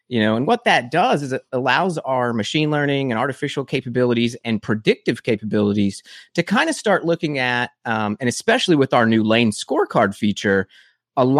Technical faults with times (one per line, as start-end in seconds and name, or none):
none